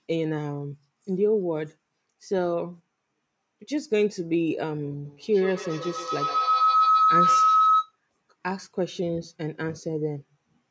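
A feedback howl runs from 5.05 to 7.99 s: two devices in the same room are joined to the call, so sound from one loudspeaker re-enters the other microphone and gains level on each pass. Instead of dying away, the repeats climb and narrow onto a tone of roughly 1.5 kHz, coming back about ten times a second, and peak about 5 dB above the speech before the howl stops.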